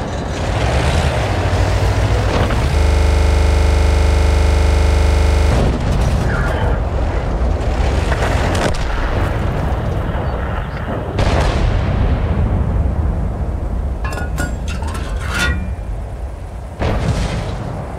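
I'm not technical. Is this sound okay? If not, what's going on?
No. From 2.78 to 5.52 s the sound stops moving forward and turns into a rapid, rattling stutter, like a machine gun firing about 25 times a second. This is a system hang loop. The computer briefly froze, but the sound hardware kept replaying the last tiny slice of audio it held, a piece only 40 milliseconds long, over and over until the system recovered.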